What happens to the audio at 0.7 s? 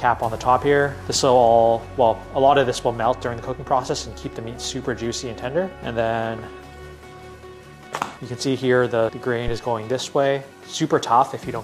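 Nothing goes wrong at 0.7 s; the audio carries through that moment intact.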